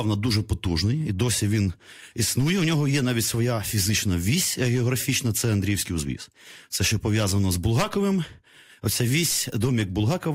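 No technical faults can be heard anywhere in it.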